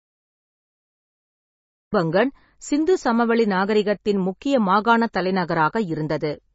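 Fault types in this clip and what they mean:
Cut-off start: The first 1.93 s are digital silence, and the speech then begins abruptly in the middle of a sound rather than with its natural onset. This points to a recording or stream that started late. On the waveform, a flat line jumps straight to signal at 1.93 s with no rising attack or fade-in. On a spectrogram, a blank region ends in a sharp vertical edge where energy appears across the band at once.
MP3 compression: Heavy coding damage runs through the whole clip. The speech sounds band-limited and watery, with fine detail smeared away, consistent with a very low bitrate of around 21 kbps. The likely cause is an MP3 encoder starved of bits, which discards everything above 7.6 kHz and drops weaker frequency components. A spectrogram would show a hard horizontal ceiling at 7.6 kHz, with patchy, flickering holes in the energy below it.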